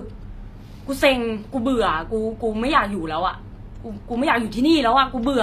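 From start to finish the speech has a gritty, metallic treble, with s sounds turned lispy, likely from HE-AAC compression at a rate near 24 kbps. A spectrogram shows copied, blocky high bands stopping sharply at 14.9 kHz, with harmonics misaligned above the crossover.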